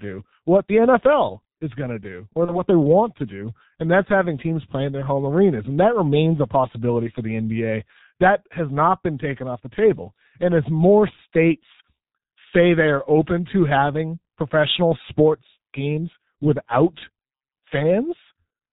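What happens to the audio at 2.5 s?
From 2.45 to 2.62 s, between "going to do or" and "they want to do", VoIP packet loss concealed by the speech codec stretches the sound into a fading buzzy tone or coloured noise. The decoder extends its last pitch and filter over a gap that fits a single lost 30 ms frame, then takes time to recover. Heavy G.723.1 codec damage at 6.3 kbit/s also keeps everything muffled and hoarse, with nothing above 4 kHz.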